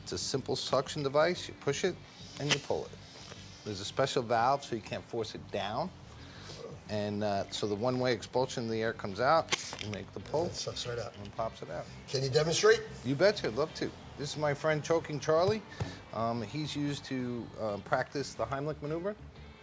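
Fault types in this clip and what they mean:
No fault types are present in this clip, so there is nothing to list or explain.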